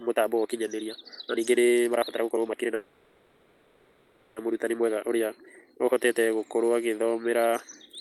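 From the start to 6.21 s, a time-stretched section plays the speech about 1.5 times faster at unchanged pitch. It sounds rushed, likely from short pieces being dropped.

From 2.75 to 4.38 s, a call audio freeze fills about 1.6 s with a fading buzz or hiss. It is likely a late-packet stall. Nothing is lost, and the speech resumes where it stopped.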